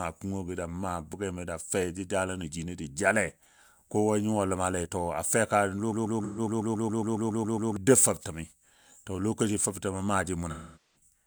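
At 5.92 s a broken-record loop begins and runs to 7.77 s. A 138 ms fragment repeats 13 times, back to back. The likely cause is a stalled player or stream resending its last buffer. The sound meant for that stretch is lost.

Inside the loop, from 6.24 to 6.40 s, comes AAC frame loss with concealment. About 128 ms goes missing, which fits three lost frames. The decoder patches the gap from the last good spectrum, leaving a brief smeared, noisy blur.

A longer dropout runs from 10.50 to 10.96 s. About 427 ms is lost, which points to ten frames. Here the concealment fades toward silence, then the sound fades back in.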